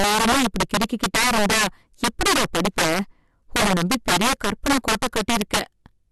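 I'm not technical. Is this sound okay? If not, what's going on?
No. Integer overflow runs through the whole clip. The speech was pushed too loud for the numbers that store it, and the peaks ran past the biggest value allowed. Instead of being held at that limit, those peaks wrapped around to the opposite extreme. Only a small share of the sound goes over, but each time it does you hear a violent crack on the loud parts, much harsher than ordinary distortion.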